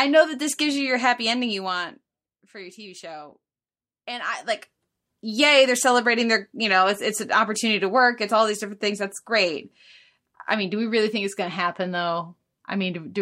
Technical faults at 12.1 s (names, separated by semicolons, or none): none